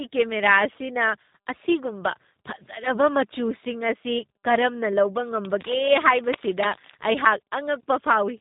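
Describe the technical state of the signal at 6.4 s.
At 6.4 s the signal is inside a burst of cable scratch noise running from 5.42 to 6.95 s. Dense, uneven rasping sits over the speech, roughly 10 dB below it. The likely cause is a worn cable or connector being moved, so its contact resistance jumps about rapidly. Unlike isolated clicks or crackle, it is a dense, irregular rustle that lasts about one and a half seconds.

Underneath, the speech shows tandem speech coding, and this runs through the whole clip. The audio passed through G.726 at 32 kbit/s, then G.711 A-law, then G.729A at 8 kbit/s. Each coder re-encoded the previous one's output, so errors build up. Nothing is heard above 3.8 kHz. What sets this apart from a single narrowband codec is the compounded roughness and warble, more muffled and smeared than one coding pass would leave.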